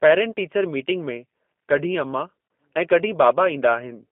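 From start to finish, the speech carries G.729 codec damage, and it is plainly audible. The sound points to the G.729A variant at around 8 kbit/s. The codec does not store the waveform. It models the vocal tract, tracks pitch and adds a few coded pulses per frame. Much detail is lost. The band runs from 200 Hz to 3.4 kHz, so the speech sounds thin and boxed. Voiced sounds come out rough and slightly synthetic.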